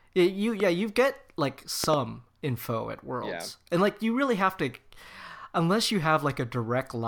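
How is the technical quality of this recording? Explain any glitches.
Three loud pops, in two bursts, disturb this speech recording. The first, from 0.60 to 0.62 s just before "you get like", is a single sharp pop roughly 10 dB above the speech. The second, from 1.84 to 1.96 s between "you get like" and "info at", is a pair of pops in quick succession peaking around 20 dB above the speech. Each is likely a voltage spike from a plug, switch, static discharge or driver glitch. The downstream circuitry shapes it into a brief thump while the speech continues underneath.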